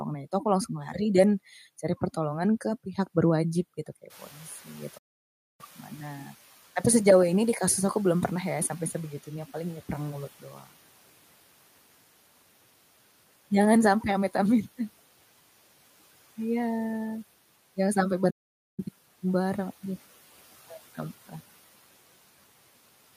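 Speech, recorded in a room whose background noise jumps by about 23 dB at roughly 4 s, and three kinds of fault follow from that and from the playback path. The first is the noise suppressor catching up: just after "pihak berwajib gitu kayak", from 4.1 s to 9.09 s, the newly louder noise passes through with little reduction and then sinks as the suppressor's estimate adapts over about 4.4 s, by about 9 dB in all, ending before "paling ya perang mulut". A spectrogram shows a broadband noise floor that appears bright at 4.1 s and fades gradually toward 9 s, while the waveform's baseline between syllables shrinks over the same stretch. Inside that stretch, from 4.98 s to 5.61 s, there is a playback stall: the sound stops mid-flow for 0.61 s and then resumes. A second stall cuts in after "jangan sampai" at 18.3 s, lasting 0.48 s to 18.8 s, before "barang duh". Both are likely the player running short of data or its thread being blocked, and each shows as a flat, silent line in the waveform and a fully black vertical band on the spectrogram, with even the noise floor gone. 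Finally, speech is cut by the noise suppressor just after "paling ya perang mulut", between 10.40 s and 10.66 s, where about 150 ms of soft speech is taken for noise and pulled down by as much as about 12 dB, so it sounds swallowed. On the spectrogram the weak speech energy there thins out against its surroundings, and the waveform envelope dips briefly.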